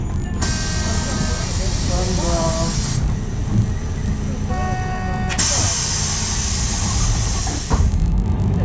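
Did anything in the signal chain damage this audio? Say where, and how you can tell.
Yes. The damage is at the sample-rate conversion stage, where a resampler restarted on every block. A buzz at 50 Hz runs through the whole clip, heard only while sound is present. That rate matches blocks 20 ms long. Each block was converted in isolation, likely from 48 kHz down to 16 kHz, so its edges lacked their true neighbours and each edge left a small error.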